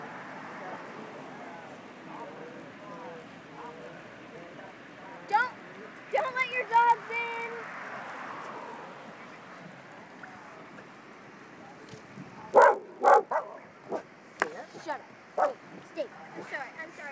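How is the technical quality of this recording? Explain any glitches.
The recording has one steady glitch: a resampler restarted on every block, present from start to finish. The sound was converted to a lower rate, which fits a 44.1 kHz to 16 kHz conversion, in 20 ms chunks processed in isolation. At each chunk edge the converter lacked the real neighbouring samples, leaving a small error every block. At 50 per second these errors merge into a buzz. Unlike mains hum, it disappears whenever the sound itself falls silent.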